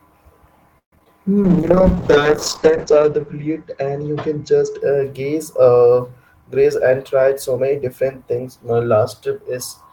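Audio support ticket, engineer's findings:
Repeated packet loss (robotic sound), 0.78 to 1.11 s: choppy speech with dropouts, the longest about 138 ms. Receiver concealment is extending the last sound across most of this span.

Call bitrate drop, 1.44 to 4.87 s: speech becomes rough and muffled as the upper band falls from 20 kHz to 8 kHz, consistent with Opus dropping from about 32 to 9 kbps. The lowest point lasts 1.15 s.

Jitter buffer speed-up, 6.26 to 8.04 s: speech sounds hurried at unchanged pitch and runs about 7% fast. The jitter buffer is trimming pitch-period segments, around 150 ms in total, to reduce its backlog.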